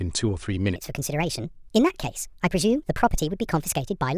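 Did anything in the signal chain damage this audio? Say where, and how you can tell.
Yes. From 0.76 s to the end, the speech turns high and hurried, 1.45 times faster and 6.45 semitones up. This is a wrong sample rate at playback, consistent with 22 kHz audio clocked out at 32 kHz.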